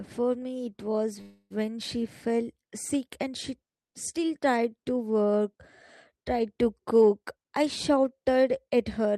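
A speech recording with two playback faults typical of packet-based calls. From 1.21 to 1.52 s there is a call audio freeze. The last sound is held and stretched into a fading buzz or hiss for about 289 ms, ending in roughly 20 ms of silence before the speech resumes where it stopped. Nothing is lost, but the gap pushes everything after it about 289 ms later. The likely cause is packets delayed in transit that left the jitter buffer empty until they arrived. From 7.25 to 8.36 s a jitter buffer speed-up follows. The speech runs at about 109% of normal rate with unchanged pitch and sounds hurried. The receiver is trimming short pitch-period-sized slices one after another, removing roughly a tenth of a second in total, to drain surplus buffered audio and bring the delay back down.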